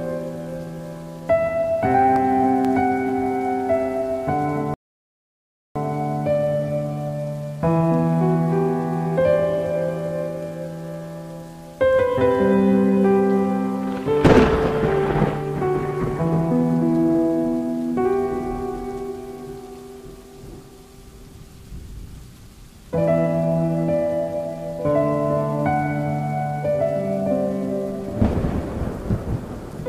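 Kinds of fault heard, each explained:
CD scratch ticks: A scratch on the disc destroys more data than the error correction can rebuild. The damage comes back once on each turn of the disc, so it repeats at a steady rate. The player fills in or mutes the lost samples. Here four short ticks fall between 1.92 and 2.65 s, about five a second. Each lasts about a millisecond at most. Together they sound like a regular clicking over the audio.
Rebuffering stall: The player ran out of downloaded audio and had to wait for more to arrive. Playback simply halts while it waits. At 4.74 s the sound cuts to silence. It resumes at 5.76 s, exactly where it stopped. Nothing is skipped or repeated, so no part of the audio is lost. The pause adds 1.02 s to the running time and is heard as a sudden gap.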